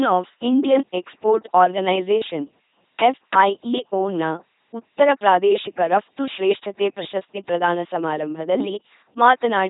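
The speech in this clip passes through an LPC-10 vocoder for its whole length, giving a buzzing, mechanical robot voice with heavy damage. Each frame is rebuilt as either pulse-driven buzz or noise through a ten-pole filter, which fits a 2.4 kbit/s rate. Nothing is present above 3.8 kHz.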